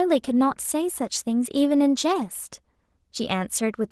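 Across the whole speech clip, Opus voice compression is plainly audible. The sound fits hybrid operation at a bitrate around 16 kbps: linear prediction codes the band below 8 kHz, and a thin transform layer covers the full band above it. The coarse excitation makes the speech hoarse and slightly robotic. On a spectrogram, harmonics below 8 kHz look smeared, and the region above shows sparse, blocky patches that change every 20 ms or so.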